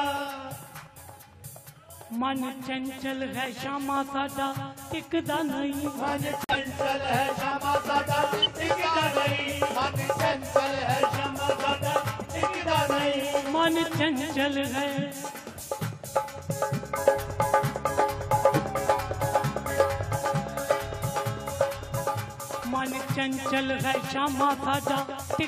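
At 6.44 s a run of compressed frames arrived with flipped bits, the decoder rejected them, and the player substituted silence. The result is a corrupt frame muted dropout: the sound cuts off abruptly and stays dead until 6.56 s, a hole of about 0.11 s, which fits four consecutive frames of roughly 28 ms each. Because the gap replaces the lost frames rather than removing them, everything after it stays in time.

At 12.21 s a single frame with flipped bits got past the decoder and was played as a corrupt frame decoded. Misread gain values or spectral codes sent energy to frequencies that do not belong in the audio, producing a short synthetic squeak or burst of noise that lasts until 12.24 s, about 37 ms, or roughly one frame. The spurious energy peaks at around -25 dBFS.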